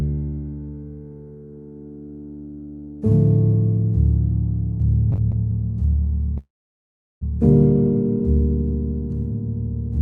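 From 5.09 to 5.35 s the sound stutters in repeated stalls: the jitter buffer ran dry four times, and each gap, the longest about 21 ms, was patched by continuing the last sound. Nothing is lost, but the motion drags. On a spectrogram, short smeared vertical slices interrupt the texture.

At 6.38 s a call audio freeze begins, likely from packets held up in transit emptying the jitter buffer. The last sound is briefly extended as a fading buzz, then about 0.75 s of silence follows before playback resumes at 7.23 s, now running about 0.84 s late. The waveform shows a short decaying tail, then a flat line, with the spectrogram above 12 kHz empty throughout from the Opus call path.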